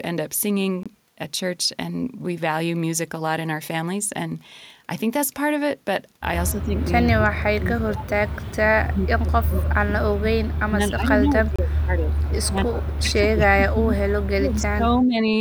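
A speech recording with two kinds of fault. Two short Bluetooth stalls cut the sound to silence, for 23 ms from 0.83 to 0.86 s and for 27 ms from 11.56 to 11.59 s. The audio then resumes, most likely because the headphone buffer ran empty while delayed packets were resent. Each shows on a waveform as a flat line with abrupt edges, and on a spectrogram as a narrow, fully blank vertical gap through all frequencies. The longer problem is speech suppressed in double talk, from 6.52 to 8.24 s and again from 8.86 to 15.33 s. The voice dips by up to about 35 dB in the first stretch and about 30 dB in the second, with around a second and a half and then several seconds of the talker pulled down in pieces. This is likely an echo canceller failing to tell this talker from the loudspeaker echo while both sides spoke, and attenuating both. The waveform shows the envelope repeatedly collapsing and recovering. 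The spectrogram shows irregular faded patches where the harmonics and upper-frequency energy thin out or vanish.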